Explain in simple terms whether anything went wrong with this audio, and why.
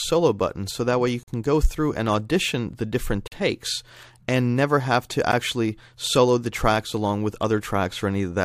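Three brief, hard-edged dropouts to silence cut into the sound, at 1.23 to 1.28 s, 3.28 to 3.32 s, and a shorter one at 5.32 s. They come about every 2 s, which points to gaps between stream segments, where the player fills mistimed joins with silence.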